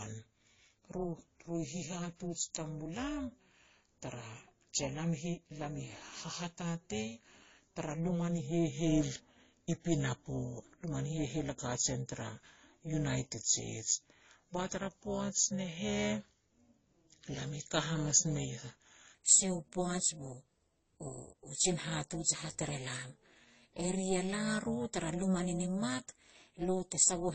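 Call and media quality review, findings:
Rough, metallic buzz on the speech for the whole clip, level pulsing by about 11 dB at a rate of around 400 Hz. Overlap-add ripple in the frame resynthesis stage: windows overlapped without summing to constant gain, so level dips and swells once per frame.

Dull, band-limited speech throughout. Smeared, swirly artefacts of two different flavours sit on top of each other. Most likely transcoding between lossy codecs, fitting an MP3 32 kbit/s stage followed by AAC-LC 32 kbit/s. The second encoder spends bits re-coding the first one's artefacts and adds its own, and the lower cut-off persists.

From 0.00 s to 19.15 s the speech is slow, draggy and deep, pitched down by about two semitones at 0.893× speed. Normal rate resumes just before "sia u". This is a section at the wrong speed, with pitch and tempo shifted together, likely from a player or editor applying the wrong clock to that segment.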